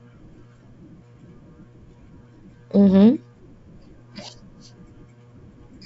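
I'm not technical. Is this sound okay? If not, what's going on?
Yes, there's nothing wrong with this sound. It has gone through G.722 wideband telephone coding, so there is nothing above about 7.7 kHz and the highest, airiest part of the sound is missing, as you would expect on a good-quality phone call.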